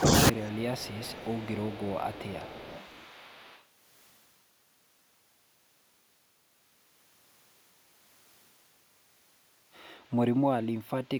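At the very start, from 0.0 to 0.12 s, the echo canceller likely got confused by both sides talking at once. Unable to tell the near talker from the loudspeaker echo, it pulled the whole signal down. This is speech suppressed in double talk: for around a tenth of a second the speech sinks by roughly 15 dB, so the opening sounds clipped and briefly ducked rather than cleanly begun.

From 0.33 to 3.62 s there is an echo leak. A loudspeaker-side echo canceller likely failed to remove everything its microphone picked up, and the remainder was sent back down the line. The result is a faint second copy of the speech trailing the original by 255 ms, sitting roughly 25 dB below it. It adds a ghostly doubling behind the talker across those three seconds.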